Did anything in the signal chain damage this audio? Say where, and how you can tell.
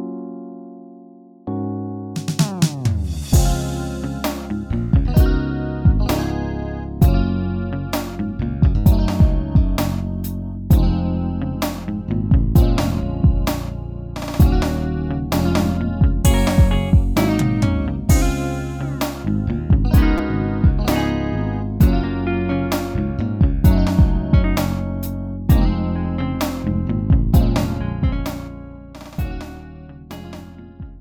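Yes, a repeated buffer at the driver/buffer stage: a brief buzz at 20.18 s where a roughly 6 ms chunk loops with hard joins, fitting a 256-sample buffer. Unlike a dropout, nothing goes silent.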